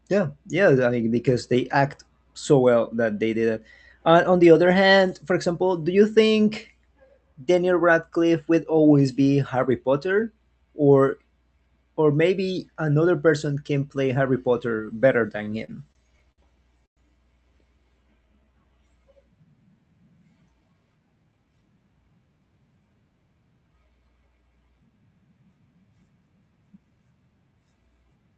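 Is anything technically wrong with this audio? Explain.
Yes, there are four faults, all in the middle of the speech, with the call codec's 8 kHz high-frequency limit audible throughout.

From 15.37 to 16.41 s there are repeated stalls (stutter): six short dropouts, the longest 59 ms, totalling 164 ms. Packets arrived late, the jitter buffer kept running dry, and the receiver stretched the last sound each time. The speech drags and stutters but loses nothing.

From 16.86 to 17.00 s comes a call audio freeze. The sound halts, a brief continuation fades, then about 100 ms of silence follows before the speech resumes where it stopped. The likely cause is held-up packets that emptied the buffer, inserting a 110 ms delay.

From 18.03 to 18.73 s a jitter buffer slow-down plays the speech at 88% speed, adding 95 ms. The receiver repeated individual pitch periods to rebuild its reserve, so sounds are drawn out at unchanged pitch.

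From 20.60 to 21.63 s a jitter buffer speed-up runs the speech at 115%, removing about 150 ms. With surplus audio queued, the receiver cut short pitch-period pieces to shrink its delay, so this stretch sounds hurried at the same pitch.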